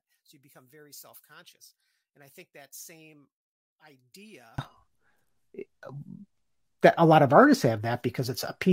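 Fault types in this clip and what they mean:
one channel inverted: One stereo channel likely had its polarity reversed, so summing the two channels to mono cancelled everything they held in common. From the start of the clip to 4.58 s the speech and its background fall away together, about 31 dB down, and what remains is only the small mismatch between the two channels, heard as a residue of the original sound rather than the full signal.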